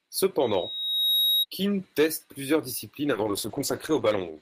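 A speech recording with two separate faults. From 0.41 s to 1.45 s a loudspeaker feedback squeal rises: the microphone is picking up its own loudspeaker, and at 3.8 kHz the loop gain tops unity, so that tone feeds on itself. It swells over roughly 0.7 s to sit about 5 dB above the speech. A spectrogram shows a single bright horizontal line at 3.8 kHz that thickens as it grows, and the waveform envelope bulges over that span. From 3.12 s, right after "teste plusieurs disciplines", to the end, there is a call bitrate drop. The bandwidth estimate collapsed and the encoder was starved of bits, which fits a fall from around 40 kbps to 10 kbps, held at its lowest for about 1.08 s. The audio turns rough and watery and loses its top end. On a spectrogram the energy above 8 kHz is sliced off where it had reached 20 kHz, leaving a hard ceiling, and what remains looks blotchy and smeared.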